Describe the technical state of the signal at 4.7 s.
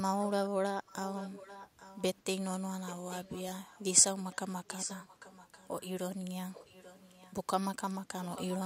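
At 4.7 s you're right at the start of an echo leak, which runs from about 4.67 to 5.89 s. A faint delayed copy of the speech trails the talker by roughly 840 ms, sitting quite a bit below the main level, maybe 15 dB down. The likely cause is a loudspeaker on the other end whose echo canceller let part of its mic pickup slip through and get sent back down the line.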